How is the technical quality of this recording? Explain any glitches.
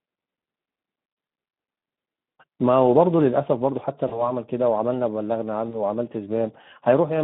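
The recording has noticeable technical damage: constant low-rate codec coding plus three brief dropouts patched over by the decoder.

Speex codec, throughout: the low-bitrate CELP coding, consistent with roughly 11 kbps, starves the excitation, so the speech sounds hoarse and grainy within a narrow 150 Hz to 3.6 kHz band.

VoIP packet loss concealed by the speech codec, at 1.23–1.27 s, 4.07–4.31 s and 5.69–5.78 s: each time about 40 ms of audio went missing and the decoder extended the last pitch and filter. This makes a brief buzzy or noisy smear that fades, with the voice staying weak afterwards.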